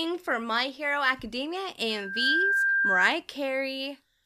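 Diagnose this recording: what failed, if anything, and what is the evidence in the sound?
A loudspeaker feedback squeal rises out of the speech at 1.89 s: a single steady tone at 1.6 kHz that swells over roughly 0.4 s, settles about 5 dB above the speech, and holds until it stops at 3.11 s. The fault lies in the analogue acoustic path, not the recording chain. The microphone was hearing the loudspeaker it feeds, and at 1.6 kHz the loop gain passed one, so that frequency kept growing.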